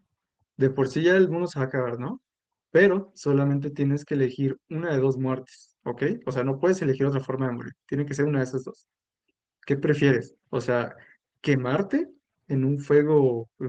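Throughout the speech the sender's clock runs about 4 percent fast relative to the receiver's, which is clock drift between sender and receiver. The jitter buffer keeps overfilling, so it must shed audio, and the result is small recurring hiccups at uneven intervals rather than a single glitch.

From 0.08 s to 13.56 s come repeated timing corrections, with the receiver trimming short pieces to keep pace with a sender running at about 104 percent. Unlike packet-loss concealment, nothing is filled with smeared or muted sound. Each edit removes a fragment, always in the same direction. The Opus call path's 12 kHz top end stays audible beneath these edits.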